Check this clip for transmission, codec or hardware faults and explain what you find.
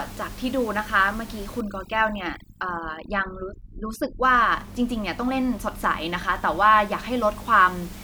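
One fault stands out: overdone noise removal between 1.61 and 4.23 s. A noise reduction stage was set far too aggressively, pushing individual frequency bands down hard whenever their level sat close to its noise estimate. In this stretch the room noise, heard elsewhere about 24 dB below the speech, collapses to near silence scattered with twinkling specks. The softer parts of the speech are swept away with it.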